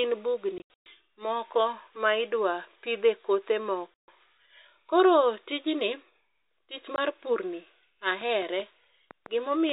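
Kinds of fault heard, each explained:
Packet loss filled with silence: Stretches of the stream went missing and were replaced by dead silence, so the speech drops out abruptly with hard edges. Around 0.58 to 0.86 s, just before "moko ma idwa pidhe", about 220 ms is cut in scattered holes (longest 120 ms). Another 140 ms hole follows "ma idwa pidhe kothe" at 3.94 s, and a single 20 ms gap sits at 6.96 s, which fits 20 ms packets. The waveform goes flat and the spectrogram shows blank vertical bands with sharp edges.
Train of clicks: From 8.21 to 9.70 s, about seven similar sharp pulses tick over the sound at an uneven pace of roughly 3.4 per second, peaking about 5 dB above the signal. They are likely caused by interference from nearby equipment or a faulty connection or power supply. On a waveform they appear as isolated narrow spikes standing above the surrounding level. On a spectrogram they show as thin vertical lines spanning the whole band up to the 4 kHz limit of the telephone-coded signal.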